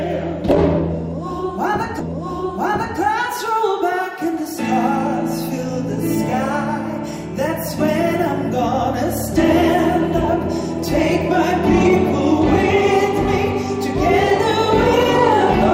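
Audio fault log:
1.99 to 2.99 s, stream segment repeated: a full second of the audio plays a second time, with a small blip where playback jumps back, because the player queued the same segment twice. Unlike a skip or dropout, nothing goes missing; the clip gains 1.0 s.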